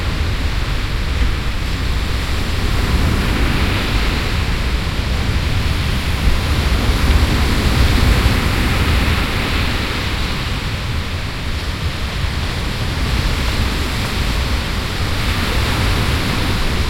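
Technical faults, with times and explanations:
Nothing stood out as a technical problem on listening.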